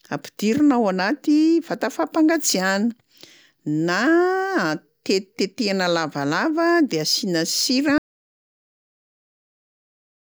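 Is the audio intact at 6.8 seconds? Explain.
Yes, the speech at 6.8 seconds plays through intact, with no audible fault at that moment.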